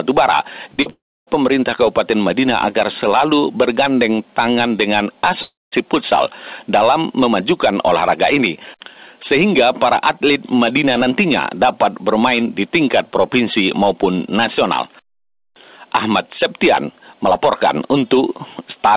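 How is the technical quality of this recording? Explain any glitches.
The recording has audible gaps and smears early on, heard through narrowband call audio with nothing above 4 kHz, which fits G.711 A-law at 64 kbps.

Short concealed packet loss at 0.74 s and 0.82 s: two brief smears, each about 40 ms. Audio packets arrived too late for the decoder, so it extended the preceding sound to fill each hole and then blended back into the real signal.

Long network dropouts from 0.90 to 1.29 s and from 5.43 to 5.74 s: the sound stretches into a fading buzz or hiss, then goes silent for about 290 ms and 200 ms, and resumes with part of the audio gone. The likely cause is that no packets arrived for roughly 380 ms and 300 ms, which is longer than concealment can cover.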